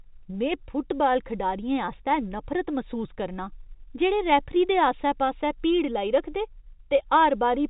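Nothing goes wrong in this speech recording: it sits inside ordinary G.711 telephone coding, so the sound stops at about 3.8 kHz, just as a landline call would, and no fault turns up anywhere along the way.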